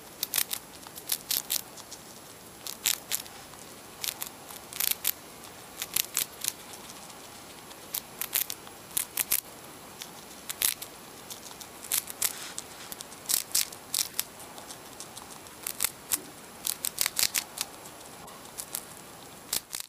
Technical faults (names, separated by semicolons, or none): corrupt frame decoded